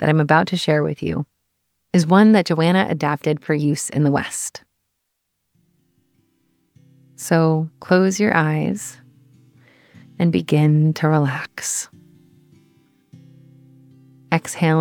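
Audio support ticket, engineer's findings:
No faults found on listening; nothing to attribute to any component. No further action needed on the audio itself.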